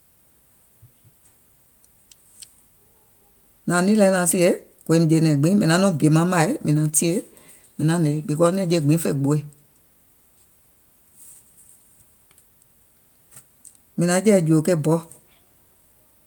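No technical faults are audible.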